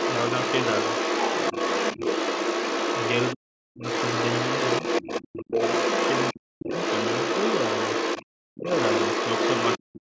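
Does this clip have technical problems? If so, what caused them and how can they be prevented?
Yes. The other side's voice leaks through from 0.0 to 3.34 s, 3.83 to 8.26 s and 8.69 to 9.96 s. It sits about as loud as the talker, and somewhat louder in the last stretch. On a spectrogram, a second set of harmonic lines overlaps the talker's. The likely cause is loudspeaker playback reaching the microphone and not being fully cancelled. A headset, or a lower speaker volume with a better-tuned echo canceller, would prevent it.

Speech is suppressed in double talk at 3.33 to 3.83 s, 5.46 to 5.55 s, 6.33 to 6.71 s, 8.46 to 8.69 s and 9.78 s to the end. The talker's level falls by roughly 40 dB in places. The waveform shows abrupt near-silent notches, and the spectrogram goes blank there. This likely happens because the canceller, unsure which voice is echo, ducks everything while both sides speak. 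Better double-talk detection, or full-duplex headsets that remove the echo path, would prevent it.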